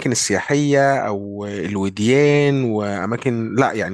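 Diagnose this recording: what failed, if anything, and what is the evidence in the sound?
Nothing failed in this recording, and the sound gives no evidence of any fault.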